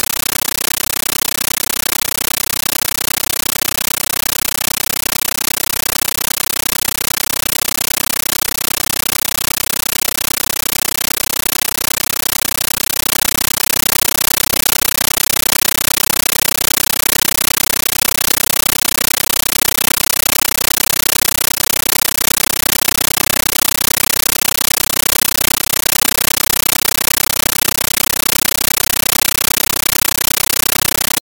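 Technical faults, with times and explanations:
Throughout, compressed stream played as audio: an AC-3 bitstream reaches the output undecoded, read as ordinary samples. Each data frame plays as a 13.3 ms loud noise burst then silent padding, 31.25 times a second, giving chattering static instead of speech; the burst density fits 640 kbps.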